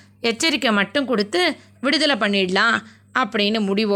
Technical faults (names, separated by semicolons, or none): corrupt frame decoded